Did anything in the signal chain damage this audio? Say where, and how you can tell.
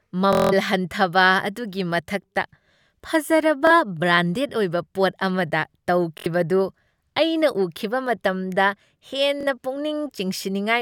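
Yes, Bluetooth stutter on the wireless link: lost packets replay the last ~23 ms slice, as a buzz at 0.33–0.53, 6.18–6.26 and 9.41–9.47 s and as a single repeat at 3.67 s, then the speech skips ahead.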